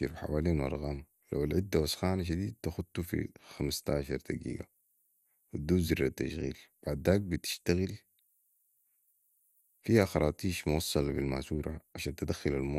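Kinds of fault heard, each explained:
MP2 compression, throughout: the speech sounds dull and carries a gurgling, granular roughness, with nothing above about 15.8 kHz, which points to MPEG Layer II coding at a low bitrate, around 80 kbps. Likely, too few bits forced upper sub-bands off and coarsely quantised the rest.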